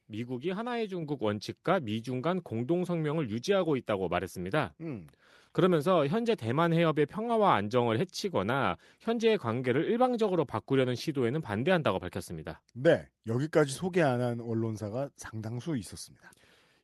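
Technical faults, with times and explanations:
1.02 s, microphone volume stepped up: the speech and background noise jump together by about 4 dB in one instant step, as the input gain is raised. A louder talker would leave the background unchanged, and smooth gain control would glide rather than jump.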